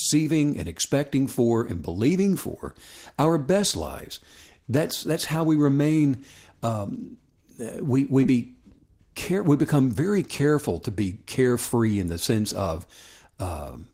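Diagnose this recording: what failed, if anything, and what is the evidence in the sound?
Network stage: short concealed packet loss at 8.23 to 8.27 s, right after "we we". About 20 ms never arrived in time; the decoder patched it by extending the preceding sound, leaving a brief smear.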